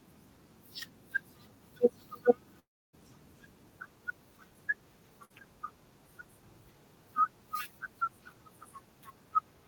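At 2.59 s the speech gives way to a smeared, fading buzz or hiss, and for about 0.27 s of the stretch up to 2.95 s there is only silence before the speech returns further on. The receiver kept the last sound going while nothing was arriving, then gave up. About 0.34 s of the original audio never plays. This pattern is most likely a long network dropout, where a whole run of the stream fails to arrive.

At 5.25 s a shorter break follows, lasting until 5.36 s. The sound is held briefly as a quickly dimming tail before the speech picks up again, slightly displaced in time. This is a burst of packet loss. Roughly 60 ms of audio went missing. The receiver covered about 50 ms of it by extending and fading the preceding sound, and the resumed audio lands about 7 ms out of step.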